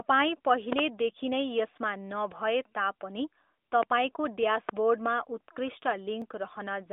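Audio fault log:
0.73 to 0.81 s, 3.83 to 3.85 s, 4.69 to 4.71 s: loud pop. Sharp pops stand about 15 to 20 dB above the speech, a double pop first and then single ones, with the speech continuing underneath. The likely cause is a voltage step from a switch, plug or static, shaped into a brief pulse by the following circuitry.
6.22 s: block of digital silence. The output drops to zero for about 0.73 ms, which fits a 32-sample buffer not filled in time, then resumes with no fade. The two hard edges are so close that they merge into one tick over the narrowband phone-line sound.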